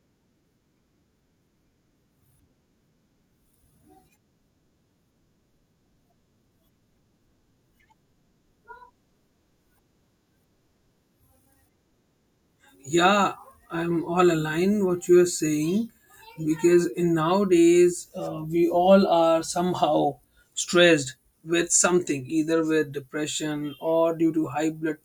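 From 18.34 s, right after "in nowadays", to the end, a 50 Hz buzz rides on the speech whenever there is signal. This is a resampler restarted on every block: each 20 ms block was converted without its neighbours, leaving an error at every edge.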